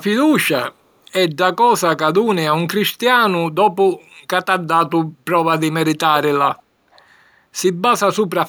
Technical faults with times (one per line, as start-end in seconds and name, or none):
6.52-6.63 echo leak
6.92-7.04 echo leak